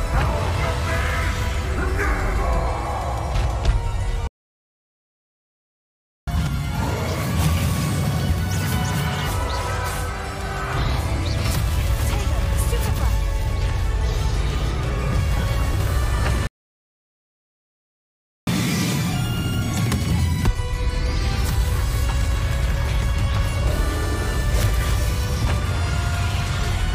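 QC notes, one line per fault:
4.27–6.28 s, playback stall: the sound cuts out in mid-flow and leaves two seconds of dead silence before it resumes. The player was likely starved of data or had its output thread blocked, so nothing reached the output until it recovered.
6.28–9.28 s, catch-up at higher speed: right after the gap, the audio runs at 1.5 times normal speed for three seconds, with pitch raised about seven semitones. The player is resampling its backlog to win back lost time, then it drops back to normal rate and pitch.
16.47–18.47 s, playback stall: a second dropout, again two seconds of silence in mid-flow before the sound continues. This likely reflects another buffer underrun or blocked thread that left the output with nothing to play.
18.47–20.47 s, catch-up at higher speed: this time the recovery is harsher, at double speed for two seconds, with pitch lifted close to ten semitones. 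The more aggressive resampling recovers the full two-second deficit faster, giving a brief chipmunk-like rush before normal playback returns.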